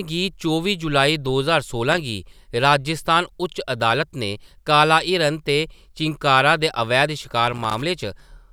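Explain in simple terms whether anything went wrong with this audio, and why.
Loose connector crackle appears twice in this speech clip: a short burst from 1.92 to 2.00 s, and a longer one from 7.48 to 7.82 s, just after "दे अवैध". It happens when a worn or dirty plug contact wobbles, so the connection breaks and remakes many times in a fraction of a second. Each break chops the sound, and any stray voltage on the line adds pops, which together produce a rough, irregular scratching noise.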